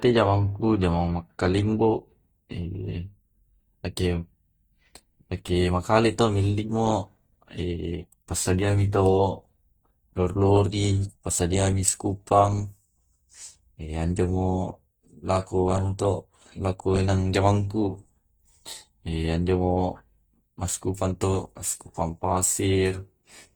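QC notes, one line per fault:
throughout, Opus compression: speech sounds plainly grainy and rough, with noise-filled bands but full bandwidth to 20.2 kHz, likely CELT-mode Opus at about 24 kbps.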